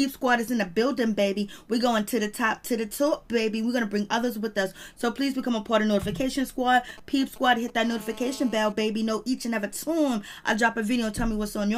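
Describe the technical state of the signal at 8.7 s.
GSM phone buzz runs from 7.84 to 8.72 s, so 8.7 s falls at its very end. A nearby 2G handset on a call transmits in bursts about 217 times a second, and the audio circuit rectifies them into a steady, raspy, harmonic-rich buzz about 20 dB below the signal.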